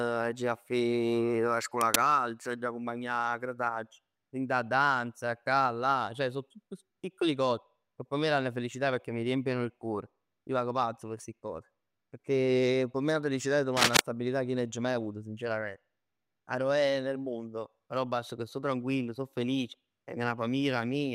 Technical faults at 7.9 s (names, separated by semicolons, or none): none